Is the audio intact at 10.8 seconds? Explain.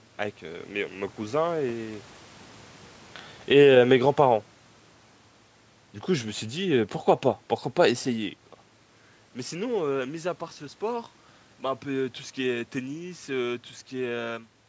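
Yes, the audio at 10.8 seconds is intact, with no fault in the signal at that moment.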